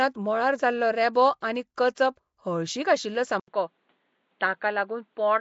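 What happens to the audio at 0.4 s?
At 0.4 s the speech carries the same plainly audible codec damage heard through the whole clip: a rough, hissy halo and a smeared, underwater quality, most likely from Nellymoser compression at a rate that sounds like about 32 kbps. The codec works in short fixed blocks with a fixed bit budget, so quiet bands get no bits and are filled with noise. A spectrogram shows nothing above 7.7 kHz and noisy, blotchy patches where weaker detail should be.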